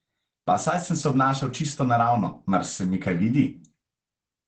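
Opus voice compression runs through the whole speech clip. The codec works in its SILK linear-prediction mode, and the damage is plainly audible. Nothing reaches above 9 kHz, so the top of the band is gone. The sound points to a low bitrate around 12 kbps, with the excitation coded coarsely. The speech is muffled. It has a hoarse, slightly robotic edge throughout.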